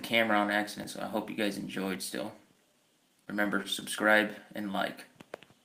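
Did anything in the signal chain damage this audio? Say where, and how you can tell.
Yes. Between 2.53 and 3.83 s the sound picks up a scatter of brief ticks and small smears, about seven of them, none longer than roughly 10 ms. These are scattered short gaps at the network stage: packets went missing or arrived too late, and the receiver covered each hole by extending the preceding sound. Together the fills total around 70 ms, about 7% of that stretch, so the audio stays clear but hiccups.

At 3.98 s there is an abrupt jump in the sound with no silence around it. Roughly 20 ms of audio has vanished and the two sides butt straight together. That points to the driver or buffer stage, with a dropped buffer (overrun) the likely cause: the capture side fell behind, the hardware overwrote a block of samples before they were read, and the stream skipped ahead.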